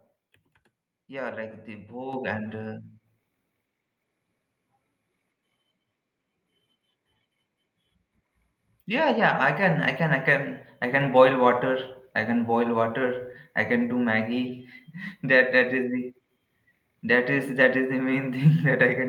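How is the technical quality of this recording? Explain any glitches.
The recording has three sudden level jumps from the microphone volume being stepped up. At 2.13 s, just after "yeah like the", the level rises by about 8 dB; at 9.63 s, between "yeah yeah I" and "I can I", by about 2 dB; and at 11.01 s by about 3 dB. Each time the call software judged the input too quiet and raised the device gain in one step, so the speech and background noise jump together. On a waveform the envelope widens abruptly at each point, and a spectrogram brightens evenly across all frequencies there.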